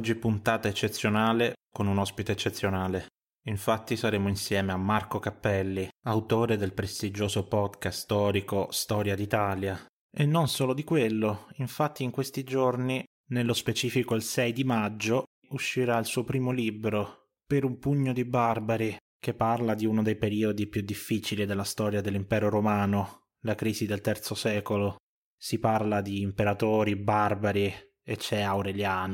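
No technical faults occur at any point in this speech recording.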